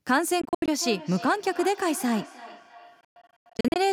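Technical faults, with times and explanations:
0.41–0.68 s, Bluetooth dropout: the sound cuts out in several separate gaps, about 168 ms missing in total over a 0.26 s stretch, the longest gap lasting 75 ms. The sound picks up each time as if it had kept running underneath. This is likely wireless packets reaching the headphones too late and being discarded, with the output held silent until valid data arrived.
0.78 s to the end, feedback echo between two devices: the audio returns as delayed copies at a steady interval of roughly 300 ms, the strongest at about 16 dB below the direct sound. Each return is thinner and more ringing than the one before. A second device in the room is playing the call back into the microphone. The local echo canceller only removes its own playback, so that path passes through and circulates.
3.01–3.80 s, Bluetooth dropout: a longer burst of holes, about 429 ms lost across 0.78 s, with the longest single gap at 112 ms. 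The way the sound resumes further along, skipping the missing material rather than pausing, points likely to a wireless link dropping a larger cluster of packets. The echo continues through this span wherever the signal comes back.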